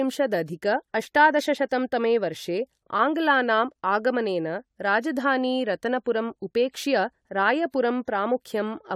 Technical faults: generation loss

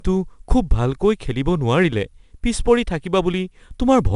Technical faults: 4-bit ADPCM compression

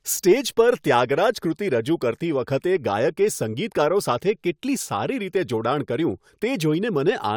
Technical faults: none

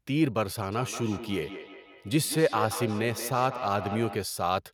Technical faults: feedback echo between two devices

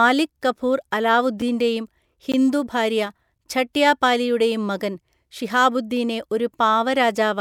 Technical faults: block of digital silence

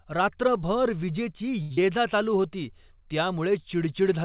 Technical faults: short stall from a late packet; short concealed packet loss

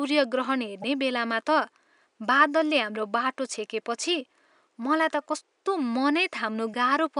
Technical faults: damaged data in a compressed stream

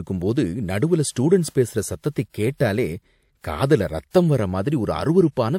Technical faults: transcoding between lossy codecs

